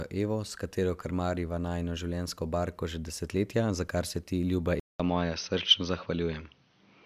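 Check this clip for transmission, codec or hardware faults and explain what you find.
One fault is present. After "kar se ti ljuba", at 4.80 s, the input likely switched to a poorer device. A 0.2 s silence marks the change, and from there to the end the speech loses everything above 6.2 kHz, sounding duller and boxier at an unchanged level with a faint new background noise. A spectrogram shows a brief gap, then a sharp ceiling at 6.2 kHz. The waveform keeps its amplitude.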